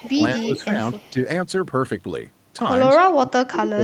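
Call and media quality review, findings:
Echo leak: faint copy of the speech 218 ms late, about 25 to 35 dB down, at 0.0–0.11, 0.39–0.45, 0.98–1.11 and 3.02–3.08 s. Likely a far-end echo canceller residual. A fixed lag separates it from room reverb.

Speech suppressed in double talk: level dips of roughly 10 to 15 dB at 0.02–0.17, 0.36–0.78 and 0.94–1.17 s, then about 30 dB from 2.94 s to the end. Likely canceller overreach during overlap. These are pumping dips, not clean packet-loss gaps.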